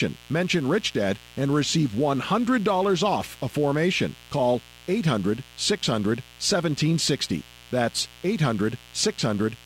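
A mains buzz runs throughout the speech, roughly 25 dB below it. Switching spikes twice per 60 Hz cycle spread harmonics into kilohertz, giving a raspy drone.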